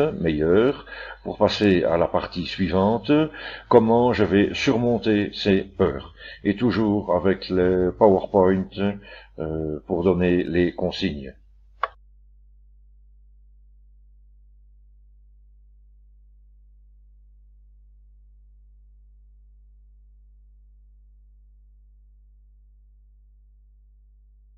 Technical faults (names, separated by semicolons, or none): mains hum